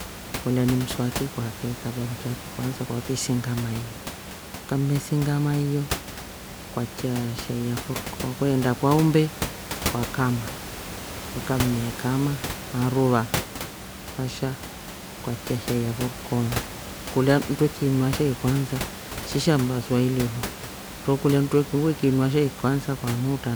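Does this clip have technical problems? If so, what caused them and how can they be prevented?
No, nothing stood out on listening to this speech clip, and the room noise heard behind it, about 11 dB below the speech, belongs to the recording space rather than the system.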